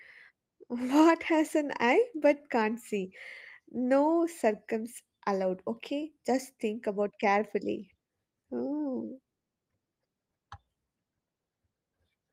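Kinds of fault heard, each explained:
No faults are present in this speech clip. The Opus voice compression is working normally, keeping the full band with only light coding texture, which fits a hybrid setting at around 24 kbps.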